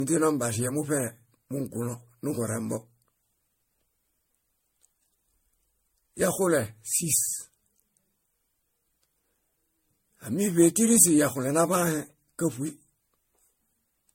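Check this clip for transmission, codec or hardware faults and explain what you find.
There is one fault, generation loss, present throughout this speech clip. The audio sounds swirly, smeared and hollow, with blurred attacks and nothing above 16.6 kHz. The likely cause is repeated MP3 re-encoding, around seven passes at a rate near 60 kbit/s. Each pass quantises on a shifted frame grid, so errors compound. A single low-bitrate encode would be cleaner. Here the hollowness exceeds what that rate alone explains.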